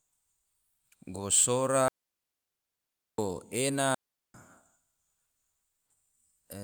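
Speech with two digital wireless dropouts, muting cleanly from 1.88 to 3.18 s and from 3.95 to 4.34 s, without the noise bursts of analogue dropouts.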